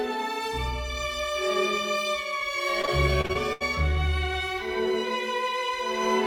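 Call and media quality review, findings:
Repeated packet loss (robotic sound), 2.81–3.62 s. Six gaps, longest 76 ms. Concealment stretches prior music over roughly a quarter. Choppy result.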